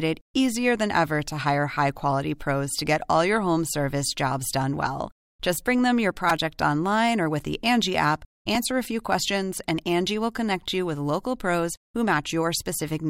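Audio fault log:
6.30 s, repeated buffer: Between "bring them your" and "online or with the", a 2.9 ms slice plays four extra times, which fits a 128-sample buffer. Fresh audio arrived late. The hard joins make a brief buzzy click. Nothing seems skipped.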